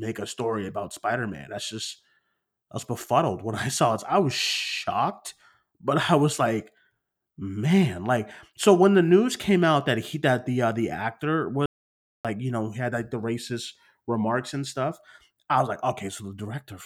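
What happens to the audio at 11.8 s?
At 11.66 s the speech cuts out abruptly and stays in dead silence until 12.25 s. That is an audio dropout to silence lasting about 0.59 s. Even the room tone vanishes. The likely cause is a lost input while the recorder kept writing silence.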